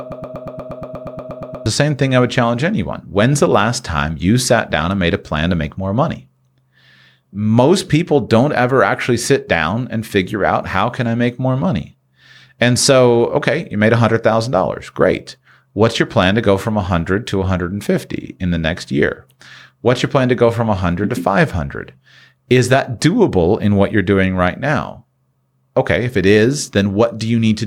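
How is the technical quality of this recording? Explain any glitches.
The recording opens with a broken-record loop from 0.00 to 1.66 s, already under way at the start. A fragment of about 0.12 s repeats 13 times, exact and back to back, until normal speech resumes on "the same thing I". The likely cause is a player or stream stalling and resending its last held fragment. Unlike a stutter or dropout, every repeat is identical, and the audio meant for that span is lost.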